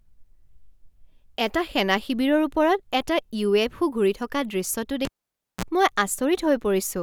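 At 5.05 s, just after "থকা দৃশ্যটো", a live cable is pulled and plugged in again. Breaking the connection throws a pop and the speech drops to near silence for about 0.55 s. As the plug goes back in, only the tip makes contact briefly, so the unshielded conductor picks up 60 Hz mains hum, heard as a 42 ms burst of buzz. A second pop marks full contact, and the speech returns at 5.65 s.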